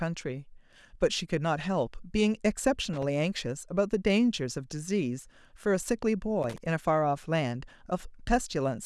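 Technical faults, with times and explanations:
2.93–3.03 s and 6.43–6.58 s, loose connector crackle: a worn contact rapidly breaking and remaking chops the speech into irregular scratchy bursts, unlike a single clean digital click.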